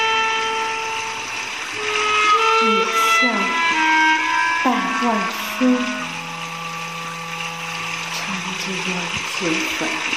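No technical faults can be heard anywhere in the signal.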